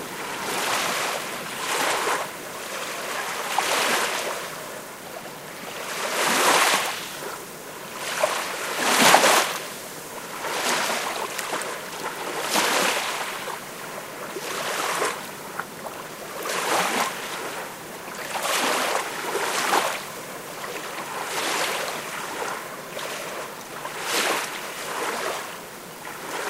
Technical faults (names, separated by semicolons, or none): low bit depth without dither